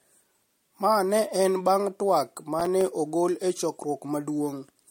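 Repeated lossy re-encoding, likely about three MP3 passes at a rate consistent with 64 kbit/s, leaves the speech swirly and hollow throughout, with blurred attacks and nothing above 16.6 kHz. From 2.60 to 2.81 s, processor overload crackle sets in: a handful of buffers, each a few milliseconds long, miss their deadlines and drop to silence, producing a gritty burst of tiny gaps.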